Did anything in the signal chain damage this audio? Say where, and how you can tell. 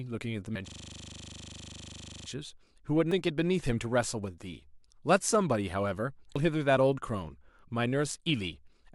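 Yes. Compressed frames skipped at 0.55, 3.11 and 6.36 s, a codec or storage fault: the speech jumps forward by roughly 0.7, 0.3 and 0.15 s. Jumps in steps of 85.3 ms point to whole damaged or missing frames being dropped.

A system hang loop from 0.68 to 2.28 s, at the driver or buffer stage: one 40 ms slice repeats 40 times, a loop rate of 25 Hz. The host froze while the sound hardware kept replaying the same ring-buffer segment.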